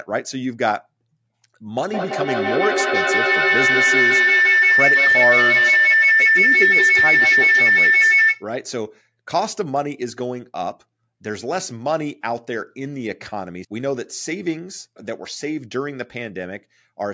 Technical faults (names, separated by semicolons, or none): feedback howl